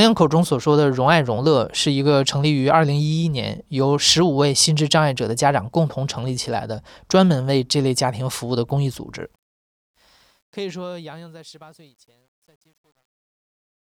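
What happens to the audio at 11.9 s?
At 11.9 s the speech is in truncation distortion on a fade, from 9.23 to 13.95 s. It is worst from 10.89 s. Undithered, about 11-bit steps turn the fading tail gritty.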